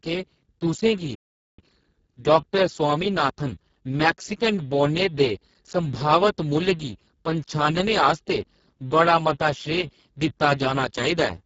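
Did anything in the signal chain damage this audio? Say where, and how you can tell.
Yes. Three faults are audible, from the codec and the playback stage.

The codec is the first stage of damage. The whole clip carries the sound of the Speex codec under heavy strain. The speech is hoarse and noisy. That points to a very low bitrate, around 6 kbps, which leaves the excitation starved of bits. The upper band sounds like shaped hiss rather than real detail.

A playback stall hits at 1.15 s. The speech cuts off mid-flow and the output goes silent. The gap lasts about 0.43 s, until 1.59 s. The sound then resumes. The most likely cause is the player running out of buffered data, or its output thread being blocked. Output only resumes once data flows again, so the gap sits at the buffer or driver stage.

Time-compressed catch-up follows straight after the stall, from 1.59 s to 4.59 s. The speech runs hurried, at 1.1 times normal speed, yet the pitch stays put. 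The player is shedding its backlog. It cuts out small pieces of audio and cross-fades across the joins, so speed rises without a pitch shift. After 4.59 s the pace returns to normal.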